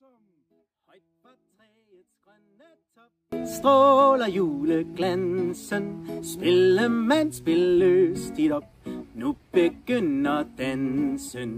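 Until 3.32 s the feed was likely lost, an audio dropout to a faint residue: a faint leak about 35 dB down, then an abrupt return.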